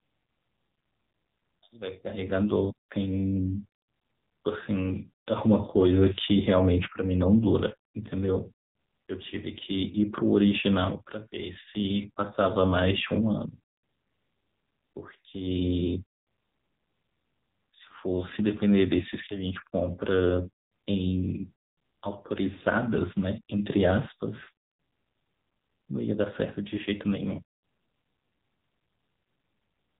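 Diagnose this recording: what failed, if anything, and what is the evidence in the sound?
Codec stage: AMR narrowband mobile codec throughout. Nothing above 4 kHz survives, and the speech sounds buzzy and synthetic, which fits a low mode near 6.7 kbps.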